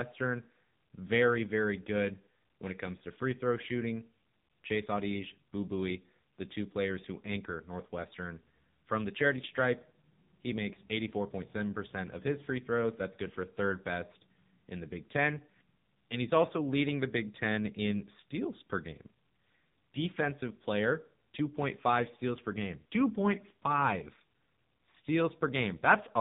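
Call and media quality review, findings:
AMR narrowband mobile codec, entire clip. Nothing above 3.8 kHz; speech buzzy, synthetic, heavy codec damage, consistent with AMR-NB near 6.7 kbps. Pitch-predicted vocal tract model, few excitation pulses. Unlike a plain low-pass, the voice texture is resynthesised, not merely dulled.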